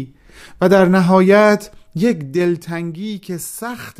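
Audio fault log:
1.58 to 3.01 s, zipper noise: the level drops by roughly 10 dB across this stretch, applied as a staircase of tiny unsmoothed jumps at around 300 a second instead of a continuous ramp. Each jump is a small discontinuity in the waveform, and together they form a fine ticking, zipping texture laid over the speech for as long as the gain is moving, which ends once the new level is reached.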